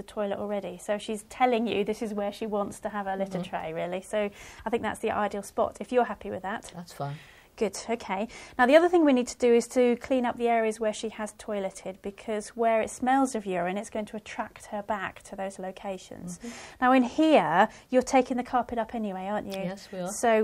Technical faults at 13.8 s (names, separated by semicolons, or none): none